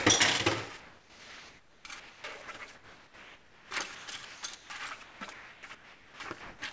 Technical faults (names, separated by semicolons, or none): sound chopped by the voice detector